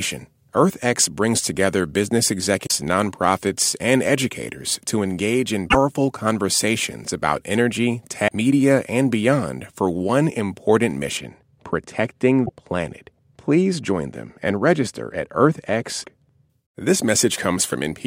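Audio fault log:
2.63–2.72 s, 5.66–5.75 s, 8.24–8.28 s, 12.42–12.51 s and 16.00–16.05 s: damaged data in a compressed stream. Bytes in the compressed speech stream were corrupted, so the decoder misread those frames, lost sync and skipped ahead to the next valid frame header. Each event is a short glitch in the speech. One falls between "and educators to engage" and "conversations about energy", and another comes right after "conversations about energy".
11.17–16.50 s: de-emphasis applied wrongly. A treble-cut filter meant to reverse pre-emphasis was wrongly applied to this speech, starting just after "beyond for one important". The response slopes smoothly downward with frequency, reaching about 14 dB lower at 10 kHz than at 1 kHz. Sibilance and consonant detail lose their edge, so this stretch sounds dull and muffled. The corruption events at 12.42 s and 16.00 s fall inside it.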